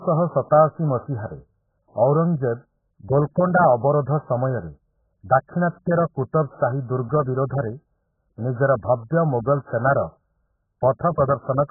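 The whole speech clip sounds dull and smeared, with nothing above 1.7 kHz, likely AAC compression squeezed down to a bitrate around 8 kbps.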